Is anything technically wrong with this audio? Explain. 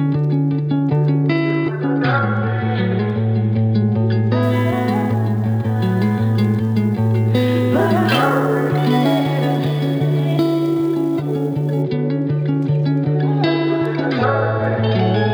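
Yes. From 4.43 to 11.82 s there is sample clock jitter: the converter's timing wanders by roughly ten microseconds, so each sample lands slightly off time. The error tracks waveform slope, roughly 30 dB below the signal, heard as hiss and roughness on loud, bright passages that disappears in quiet.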